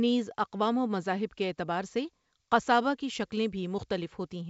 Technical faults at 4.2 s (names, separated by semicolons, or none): none